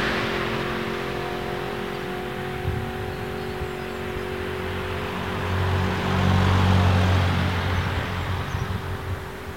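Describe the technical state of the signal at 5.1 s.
Low bit depth without dither is present at 5.1 s, as it is across the whole clip. The sound carries a grainy distortion that moves with it and sits roughly 30 dB below the signal. The likely cause is samples truncated to a coarse grid with no dither, which fits about 7 bits. Because the rounding error follows the waveform, quieter parts of these sounds turn gritty, and the faintest details sputter or drop out.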